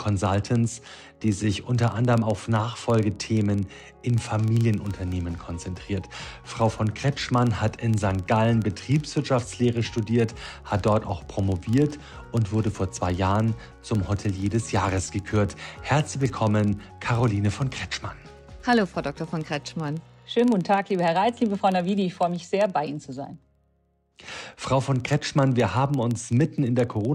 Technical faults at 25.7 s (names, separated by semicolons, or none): filter restarted on every block